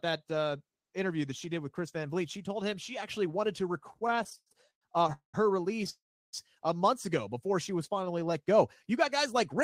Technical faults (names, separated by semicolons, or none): repeated stalls (stutter); call audio freeze